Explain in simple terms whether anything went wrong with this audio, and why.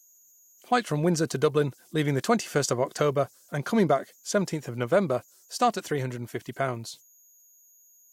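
A faint, high whistle runs through the whole recording. It sits near 7 kHz, well above the speech. It is easiest to hear in the pauses, and it adds a grainy edge under the quieter parts of the speech. This fault is called converter idle tones. The part that turned sound into digital data got stuck repeating the same small pattern when the sound was very quiet. That repeating pattern plays back as a steady tone.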